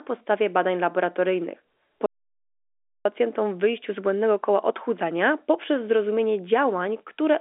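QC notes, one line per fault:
2.06–3.05 s, audio dropout to silence: the input likely lost its connection or was muted while recording continued, writing silence for about 0.99 s; after "podstawie badań laboratoryjnych" the speech cuts to dead silence with no room tone, resuming at "w wyjściu z błędnego", and the speech in between is lost.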